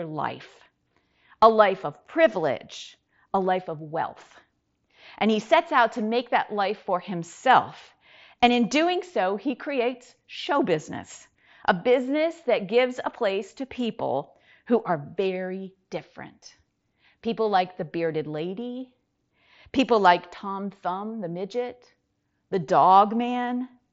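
Nothing goes wrong anywhere in this speech recording, which comes through a Bluetooth mSBC headset link doing its ordinary job.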